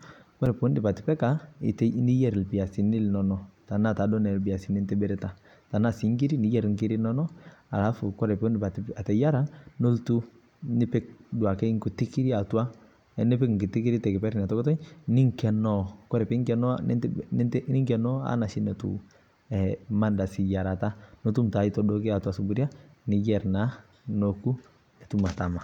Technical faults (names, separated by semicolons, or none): block of digital silence